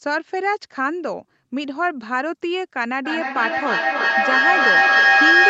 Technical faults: feedback howl

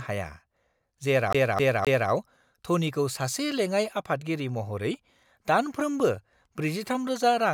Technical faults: CD stuck on one turn

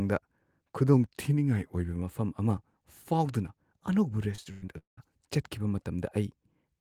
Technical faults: drift correction step; repeated packet loss (robotic sound)

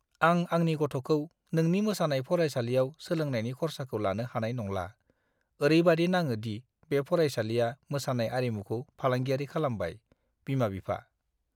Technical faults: none

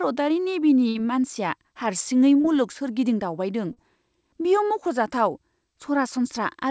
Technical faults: burst of packet loss; short concealed packet loss

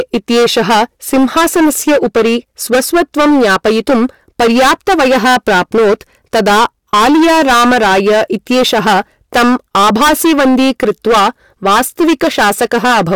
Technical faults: hard clipping

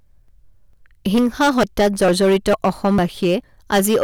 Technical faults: hard clipping; audio missing between chunks

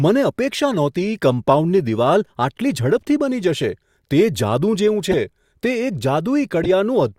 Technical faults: corrupt frame decoded

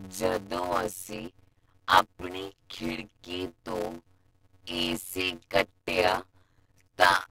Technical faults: block size mismatch (padded)

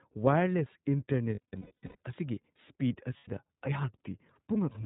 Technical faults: iLBC codec; lost iLBC frames

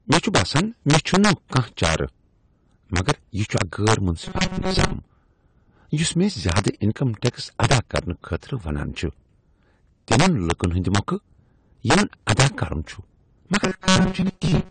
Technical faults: integer overflow; low-bitrate audio saved at a high bitrate; robotic sound from repeated short buffers

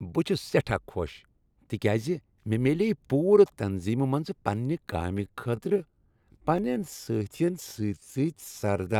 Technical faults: time-stretched section

